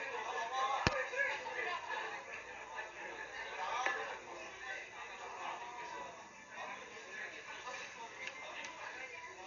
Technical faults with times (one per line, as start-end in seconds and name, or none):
0.00-9.46 Dolby Digital compression